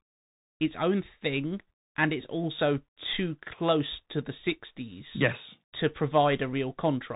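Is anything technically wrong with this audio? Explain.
Yes. Bluetooth CVSD headset codec damage runs throughout the speech: a one-bit up/down coder with adaptive step size, which fits a 64 kbps stream, cuts everything above 3.8 kHz, so s sounds turn scratchy, loud bright sounds distort, and a granular hiss sits underneath.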